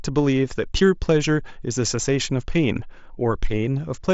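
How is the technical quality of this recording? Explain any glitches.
No glitches or technical faults can be heard here.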